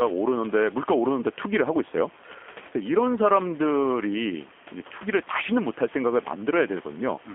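G.729 codec coding runs through the whole speech clip. The sound is confined to a 250 Hz to 3.4 kHz line band and rebuilt from a vocal tract filter, pitch predictor and sparse pulses, giving plainly audible roughness and a synthetic edge, which fits an 8 kbit/s G.729A stream. Room noise sits about 22 dB below the speech.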